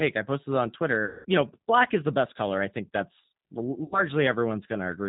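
Throughout, the speech sounds slightly rough and synthetic, with nothing above 4 kHz, a band-limited, buzzy texture that fits the G.729 codec at 8 kbit/s, here its G.729A form. The codec damage is plainly audible because each 10 ms frame is rebuilt from a vocal tract filter, a pitch estimate and a few pulses rather than the original waveform, so fine detail is lost and replaced by a modelled approximation.

From 1.05 to 1.25 s, just after "I posted on", the voice is stretched into a buzzy tone or a coloured noise that fades out. This is VoIP packet loss concealed by the speech codec. About 200 ms of audio is missing, which fits roughly ten lost packets. The decoder fills the gap by repeating its last pitch and filter settings at falling gain. At 3.84 s, after "color I think that's", a shorter loss of about 80 ms gives the same fading concealment. The voice stays weak or distorted until 4.03 s, because each decoded frame depends on the previous one, so the decoder needs time to recover once packets arrive again.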